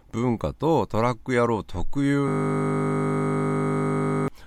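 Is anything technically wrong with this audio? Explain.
Yes, there's a system hang loop. From 2.28 s to 4.28 s the speech stops and a 20 ms slice gets replayed over and over, about a hundred times. The machine or driver stalled while the sound hardware kept cycling the same small ring buffer, which fits a buffer of around 20 ms. Because that slice is so short, it doesn't stutter. It fuses into a steady 50 Hz buzz, and about two seconds of real audio is lost underneath it.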